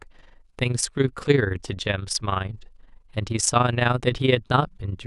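Across the whole speech clip, the processing chain split the signal into windowed frames and rebuilt it with an overlap whose windows do not add up to a constant gain. This is overlap-add ripple: the level swells and dips once per frame, here by about 11 dB at a rate of around 20 Hz. The result is a rapid, rough flutter riding on the speech, giving it a rough tremolo from start to finish.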